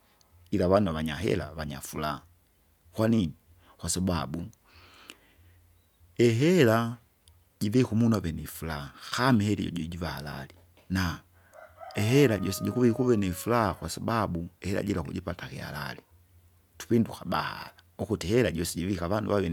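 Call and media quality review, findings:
No audible faults in the speech signal; level, continuity and timing hold steady throughout, with no dropouts, distortion or interruptions detected.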